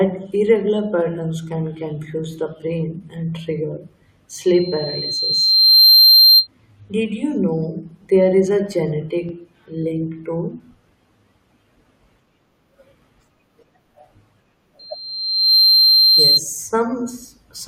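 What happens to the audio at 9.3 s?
At 9.29 s the speech hits a brief Bluetooth stutter, lasting until about 9.33 s, just before "link to". A packet arrived late or not at all. The receiver filled the gap by replaying its last slice of audio, about 23 ms long. That points to a single lost packet. You hear a quick doubled blip. The speech then resumes further on, as though it had kept playing through the gap.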